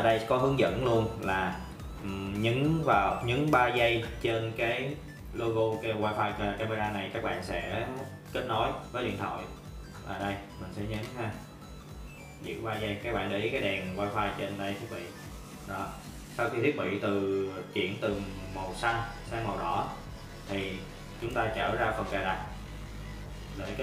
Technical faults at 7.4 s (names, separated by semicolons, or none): channel delay (comb filtering)